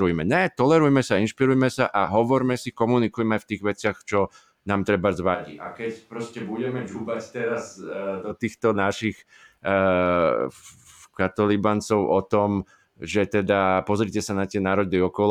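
A speech recording with a switch to a distant microphone from 5.36 to 8.30 s. The sound abruptly turns roomy and hollow, loses bass, drops roughly 10 dB, and picks up room noise about 35 dB below the speech. The close microphone's signal likely failed briefly.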